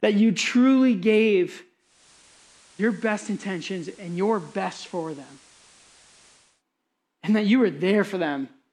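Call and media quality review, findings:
Digital radio blending to analogue, 1.78–6.63 s, just after "you truly gave". Digital lock lost; receiver cross-fades over 339 ms to the FM broadcast of the same station, then back. Symptoms: level drops about 4 dB, broadband hiss sits roughly 25 dB under the speech. Spectrogram: uniform noise floor across the span. Waveform: short ramps at each edge and a step down in envelope. Probable component: hybrid tuner blend logic.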